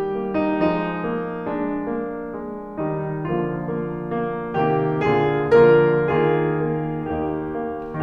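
Nothing in the music stood out as a technical fault on listening.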